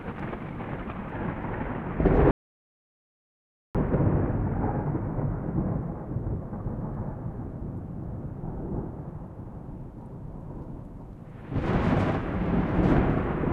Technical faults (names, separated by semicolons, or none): audio dropout to silence